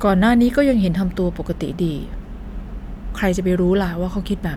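No faults detected in this speech recording; nothing to log.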